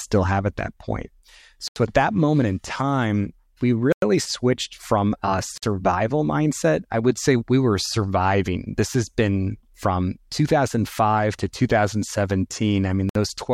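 Speech that cuts to brief silence four times: at 1.68 s (81 ms) just before "at that moment in", 3.92 s (98 ms), 5.58 s (50 ms) after "switched from a", and 13.09 s (60 ms). Each gap then resumes, consistent with a likely Bluetooth stall, where the headphone buffer ran dry.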